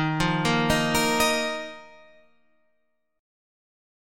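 From 1.37 to 1.86 s, zipper noise: the level falls by roughly 10 dB in unsmoothed 1 dB steps, about forty per second, so a fast ticking rides on the sound. The waveform envelope forms a staircase, and the spectrogram shows faint broadband vertical lines at each step.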